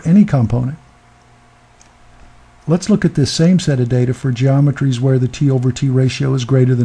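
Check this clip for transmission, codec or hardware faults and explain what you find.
No faults turn up anywhere in the clip. Nothing interrupts or disturbs the sound at any point.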